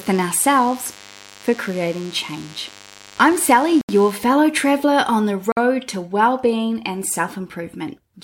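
DECT cordless phone buzz runs from 0.0 to 4.12 s, a thin, steady 100 Hz drone with many harmonics, roughly 25 dB below the speech. A nearby DECT handset or base transmits a burst every 10 ms, and the audio circuitry rectifies each burst into sound; the buzz stops just before "fellow traveler on the" begins.

Bluetooth stalls cut the speech to silence at 3.81 to 3.89 s (76 ms), just before "fellow traveler on the", and at 5.52 to 5.57 s (50 ms), right after it. Each gap is likely a wireless dropout: held packets emptied the headphone buffer until retransmissions arrived.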